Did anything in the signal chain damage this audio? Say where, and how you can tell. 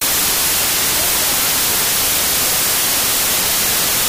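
Yes, at the sample-format conversion stage: wrong sample width throughout. The 16-bit speech was read as packed 24-bit, so it's buried in loud noise and runs about 1.5 times too fast and high.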